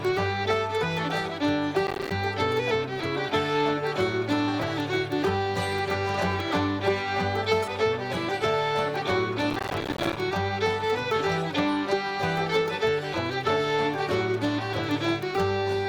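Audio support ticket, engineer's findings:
Processor overload crackle, 1.87–2.11 s and 9.50–10.17 s: dense gritty tearing from dozens of missed few-millisecond buffers dropping to silence. Unlike a single dropout, it is a rapid cluster that ends abruptly when the load clears.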